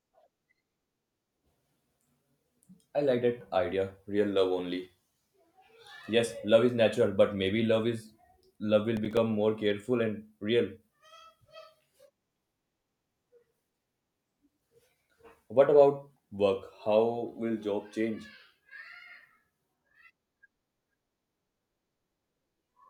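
At 8.97 s, just after "love is love will", a burst of processor overload crackle runs to 9.17 s, ending before "more careful". The processor misses several buffer deadlines in a row. Each miss drops in silence with hard edges. The gritty tearing points to a handful of short buffers, around 5 ms each.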